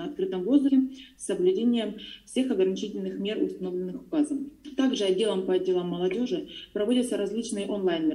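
Compressed frames are skipped at 0.68–0.70 s and 1.98–2.00 s. The audio jumps ahead by roughly 70 ms and then 50 ms, about three and two 23.2 ms frames. Each join is visible as a brief discontinuity in the waveform and spectrogram.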